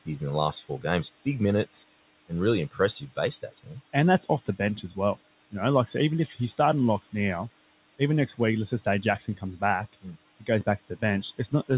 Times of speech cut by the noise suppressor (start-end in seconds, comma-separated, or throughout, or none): 0.52-1.26, 2.71-5.17, 6.27-6.59, 8.71-9.62, 9.93-11.70